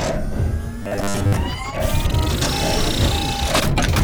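From 0.83 to 1.33 s there's robotic sound from repeated short buffers: a rigid 100 Hz buzz, likely from roughly 10 ms chunks looping while most real audio gets skipped.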